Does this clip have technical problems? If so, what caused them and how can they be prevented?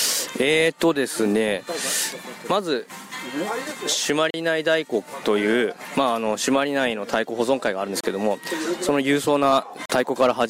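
Yes. Short holes appear at 4.30 s (about 36 ms), 8.01 s (30 ms) and 9.86 s (40 ms). These are blocks of digital silence, where the sound cut out abruptly to silence and back without a fade. The usual cause is the processing or playback program failing to fill its output buffer in time, though invalid calculated values can do the same. To prevent it, use larger buffers or lighter real-time processing so each block is delivered before its deadline.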